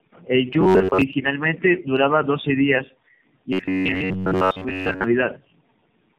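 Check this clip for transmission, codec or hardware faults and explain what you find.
Yes, there are two faults: tandem speech coding across the whole clip, and robotic sound from repeated short buffers in two stretches of this speech.

Tandem speech coding is present throughout. Each coder re-encodes the previous coder's already damaged output, so the speech sounds rough, muffled and warbly. The character fits narrowband AMR coding applied three times in a row. A spectrogram shows nothing above about 4 kHz and smeared, blotchy formants.

Robotic sound from repeated short buffers occurs from 0.61 to 1.02 s and from 3.53 to 5.04 s, the second starting just after "duraba doce días y". Most of the real audio is likely skipped, with a short segment replayed every 10.7 ms. This forces a rigid metallic buzz at 93.8 Hz. The waveform shows closely repeating cycles, and a spectrogram shows flat harmonic lines spaced 93.8 Hz apart.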